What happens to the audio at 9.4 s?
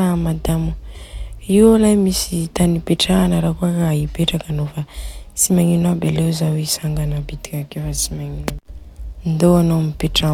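Nothing goes wrong at 9.4 s: the speech carries on intact through that moment, with no dropout, click, distortion or other fault to be heard.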